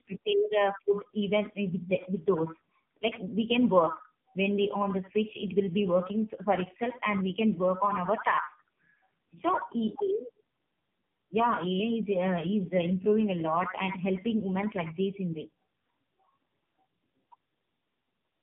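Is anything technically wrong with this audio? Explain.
Yes. Throughout, the speech sounds rough, muffled and warbly, with nothing above 3.7 kHz. This is tandem speech coding: two low-rate coders in a row, which points to AMR-NB, the second re-encoding the first's degraded output.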